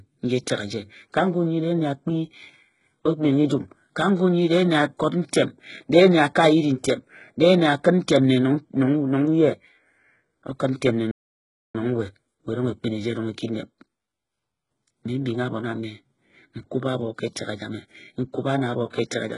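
HE-AAC compression runs through the whole recording. The likely cause is a low-bitrate HE-AAC v2 encode, perhaps around 12 kbps. The treble is rebuilt by copying lower bands upward, so sibilants sound gritty and lispy and the upper harmonics fail to line up.

A playback stall comes from 11.11 to 11.75 s. The speech cuts out mid-flow for about 0.63 s and then resumes, most likely because the player ran out of buffered data or its thread was briefly blocked.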